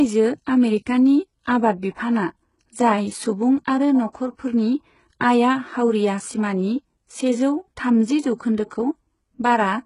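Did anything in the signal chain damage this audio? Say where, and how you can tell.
Yes. Throughout the speech, the treble sounds synthetic: sibilants come out gritty and metallic, and nothing is present above 11.1 kHz. This points to the codec stage, likely HE-AAC compression. The upper band has been rebuilt by spectral band replication, which copies lower bands upward under a coarse envelope, so the harmonics don't line up across the crossover. The heavy damage fits a very low bitrate, around 12 kbps.

The same codec stage also produces pre-echo twice: a brief hiss just ahead of a sharp onset, lasting from 4.13 to 4.15 s after "बिफानआ जाय सुबुं आरो", and from 8.38 to 8.40 s after "सिमानि सेजौ थामजि". Each smear lasts about 21 to 23 ms. The transform spread quantisation noise sized for the loud attack across its whole block, so the noise leaks into the quiet moment before the attack and softens it.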